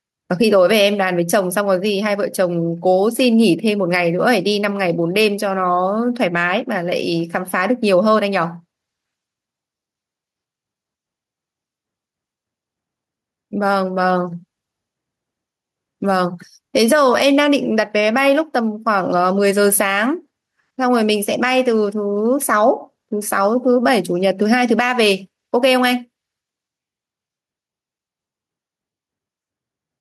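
Gain pumping runs through the whole recording. Each time the speech gets loud, the level is pulled down, then comes back up in the pauses, with a level swing of roughly 5 dB. The cause is likely input gain set far too high, with a fast limiter clamping down on every peak. On a waveform the peaks look flattened to a near-constant ceiling.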